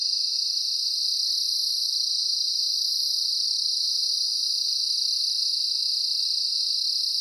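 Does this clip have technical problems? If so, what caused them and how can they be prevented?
No, nothing stood out as a technical problem on listening, so there is nothing here that calls for prevention.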